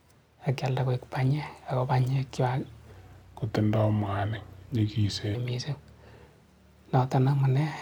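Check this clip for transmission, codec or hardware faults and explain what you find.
One fault stands out in this speech clip: a section at the wrong speed. From 2.92 s to 5.35 s, the audio plays at about 0.82 times its recorded rate. The voice drops by roughly three semitones and drags. Pitch and pace shift together at the start, then snap back together at the end. The likely cause is an edit or playback stage that fitted this stretch to the wrong clock.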